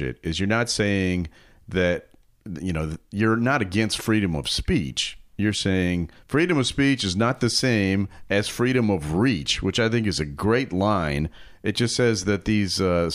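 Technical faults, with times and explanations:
No technical faults can be heard in this speech clip.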